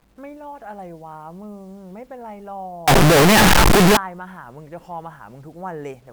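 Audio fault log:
2.88–3.97 s, signed and unsigned mixed up: speech becomes very loud, harsh distortion, quiet parts as loud as the rest; likely 8-bit samples read with wrong sign, flipping the top bit.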